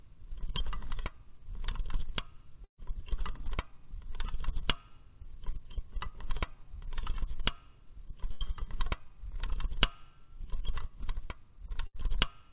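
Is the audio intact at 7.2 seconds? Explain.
Yes, the audio is intact at 7.2 seconds, with nothing there beyond the narrowband character of the call path, which leaves no content above 4 kHz.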